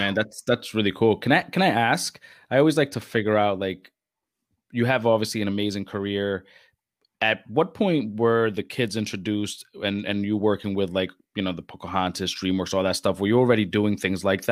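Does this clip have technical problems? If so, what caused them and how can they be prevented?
No, no technical problems here.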